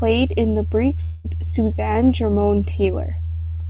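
At 1.04 s the speech cuts out, and a fading buzz stretching the last sound fills about 200 ms until it resumes at 1.26 s, with 0.2 s simply gone. That's likely a long network dropout the receiver papered over, heard through narrowband audio capped at 4 kHz.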